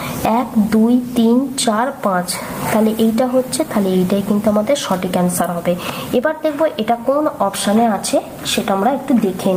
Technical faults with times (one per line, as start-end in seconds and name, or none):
0.00-9.57 gain pumping